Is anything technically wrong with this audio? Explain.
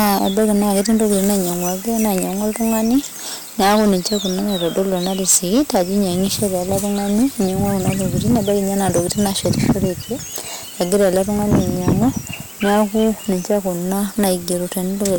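Yes, the speech is hard clipped from start to finish. It was driven roughly 17 dB past what the stage could pass, so every peak is sliced flat, with a few percent of samples sitting at the ceiling. Those square tops add harmonics high in the spectrum, giving a harsh fuzz on each loud syllable. Unlike soft saturation, which rounds peaks into a warmer thickening, this distortion is abrupt and gritty, and it appears only where the level peaks.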